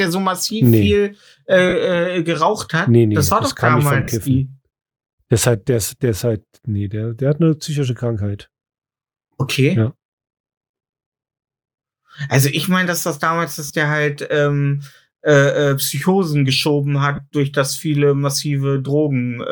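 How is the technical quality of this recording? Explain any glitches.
The speech carries five short dropouts from lost LE Audio frames; the light lossy compression is faint and not a fault. The gaps fall at 1.69 s after "so massiv nee viel", 4.03 s, 9.53 s, 13.67 s between "meine dass das damals" and "der halt ähm äh", and 17.16 s before "durch das viele". They last roughly 22 to 45 ms, which fits runs of 7.5 ms frames. The LC3 decoder concealed each gap by repeating the last spectrum with scrambled phase, so each one sounds like a brief noisy smear.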